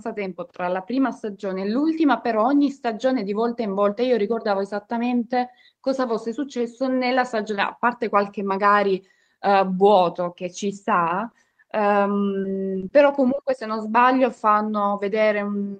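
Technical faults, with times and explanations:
11.23–11.25 s and 11.61–11.63 s, lost packet rebuilt from error correction: each time a 20 ms packet went missing, and the decoder played the low-bitrate copy carried in the following packet. There is no gap, but the speech turns briefly rough and grainy. A spectrogram shows a thin, noisier vertical strip with blurred harmonics, and the waveform stays continuous.
11.31–11.35 s and 11.49–11.65 s, short concealed packet loss: 20 ms of audio never arrived in each case. The receiver extended the preceding sound to cover the hole and then cross-faded back into the real signal, which leaves a brief smear or wobble. The second event also stretched the timing slightly, by roughly ten milliseconds. A spectrogram shows harmonics frozen flat for a moment, and the waveform shows a repeated cycle where the signal should change.
12.39–13.39 s, repeated packet loss (robotic sound): four separate 20 ms holes, 80 ms in total and about 8% of this second, were each patched by continuing the last sound. 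Around 200 ms more came from error-correction copies. The result is choppy, with pieces missing. A spectrogram shows repeated frozen, streaky slices and noisier patches, and the waveform shows periodic looped segments.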